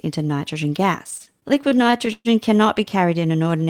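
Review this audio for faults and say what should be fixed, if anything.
Repeated stalls (stutter) from 1.03 to 2.28 s: packets arrived late, the jitter buffer kept emptying, and the receiver stretched the last sound through each wait, up to 124 ms, about a quarter of that span, so it drags without losing anything. A larger, adaptive jitter buffer and a steadier network path would prevent this.

Jitter buffer slow-down from 3.43 to 3.66 s: to rebuild its reserve the receiver repeated pitch periods, adding 43 ms and running at 85% speed with the pitch unchanged. Keeping the buffer's target delay stable, rather than letting it run low, would prevent this.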